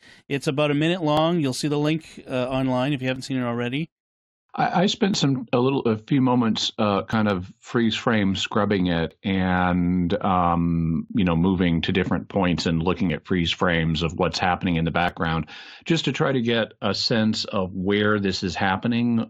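Small skips break the speech at 1.17, 5.14, 7.13, 9.11, 11.09, 13.10 and 15.09 s. The first follows "it's about a minute". Another falls between "a few moments uh" and "of freeze frame scrubbing", and another between "different points and looking" and "at freeze frames of". This is overlap between stream segments. Segment boundaries repeat about every 2 s. Each time, roughly 5 to 16 ms of real audio is trimmed away. The waveform jumps, giving a tick or tiny skip.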